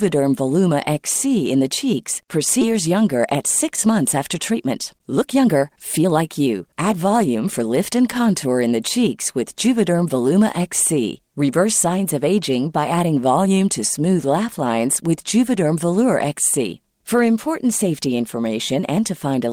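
At 2.61 to 2.63 s the speech jumps abruptly forward with no gap, and about a second and a half of audio is simply missing. This is a skip ahead: that stretch was dropped while later audio was already queued, splicing the two sides together.

From 2.71 to 8.45 s the speech sounds hurried, running at about 113% of normal speed while the pitch stays unchanged. This is a jitter buffer speed-up. The buffer held more audio than its target, so the receiver trimmed many short pitch-period slices, about 0.7 s in total, to reduce the delay.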